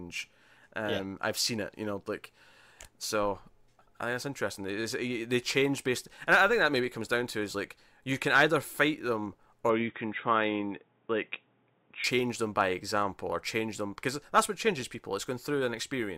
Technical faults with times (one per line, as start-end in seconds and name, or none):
9.69-12.04 input switched to a poorer device